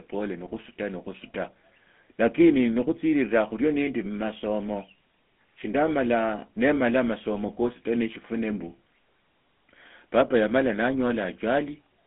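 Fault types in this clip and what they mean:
GSM full-rate codec: speech passes through a 200 Hz to 3.5 kHz line band, sounding buzzy and gravelly throughout; spectrograms show nothing above 3.5 kHz, with coarse, pulse-like excitation.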